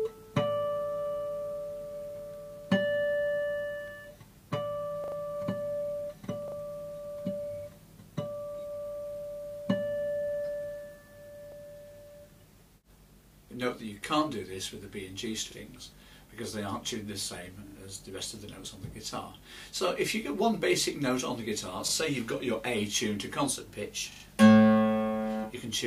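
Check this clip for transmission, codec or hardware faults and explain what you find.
Seven repeated-buffer faults occur, at 5.04, 6.48, 11.52, 15.52, 17.68, 21.88 and 24.12 s. Each time, fresh audio failed to reach the playback device before its deadline, so it replayed the last buffer. The repeated piece is about 40 ms long, which points to a 40 ms buffer. It sounds once to three extra times, with hard joins, creating stutters of 0.04 to 0.12 s. The longest are at 5.04 and 24.12 s. Essentially no audio is lost.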